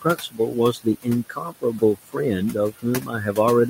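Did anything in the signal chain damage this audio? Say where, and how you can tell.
Yes. The noise suppressor in the call-processing stage runs throughout, cutting the steady room noise, which sits about 16 dB below the speech, by about 15 dB between phrases. Because it changes gain band by band and frame by frame, the remaining noise swells back under the speech.

The same suppressor also mistakes stretches of speech for noise and cuts them, from 0.02 to 0.56 s, 1.29 to 2.16 s and 3.01 to 3.13 s. The deepest drops are about 18, 15 and 8 dB, leaving roughly 200, 300 and 100 ms of sound swallowed and faint.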